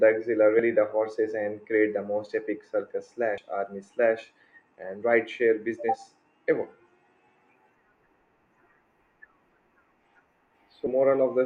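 At 0.59 s the speech lurches forward just before "the horses and create". That's compressed frames being skipped: the decoder never played a couple of frames, so around 70 ms of audio is simply gone, which fits a 32 ms frame size. It happens again at 3.38 s, between "the most epic circus" and "army slash and ride", this time roughly three frames, about 100 ms.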